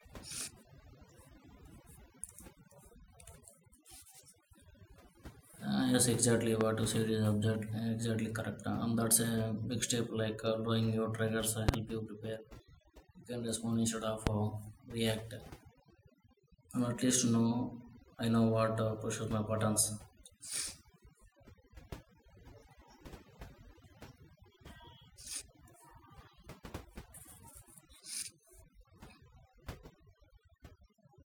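Overdone noise removal runs through the whole speech clip: an overly aggressive noise reducer pulls individual frequency bands down whenever they resemble its noise estimate, taking quiet parts of the voice with them, so the background drops and breaks up into twinkling specks.

A loud pop lands at 6.61 to 6.63 s, between "yes exactly" and "you said is object", roughly 15 dB above the speech. A double pop follows at 11.69 to 11.76 s, and a single one at 14.27 to 14.29 s, each around 20 dB up. These sharp voltage pulses, likely from a plug, switch or static discharge, sit on top of the speech, which continues underneath.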